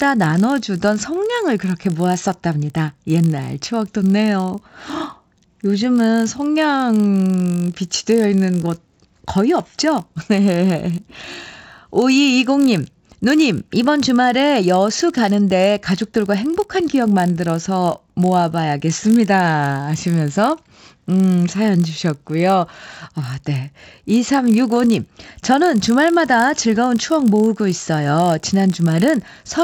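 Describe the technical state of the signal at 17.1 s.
At 17.1 s the speech carries a resampler restarted on every block, a fault running through the whole clip. Each 20 ms block was converted, apparently from 16 kHz up to 48 kHz, without its neighbours, leaving an error at every block edge that merges into a 50 Hz buzz riding on the signal.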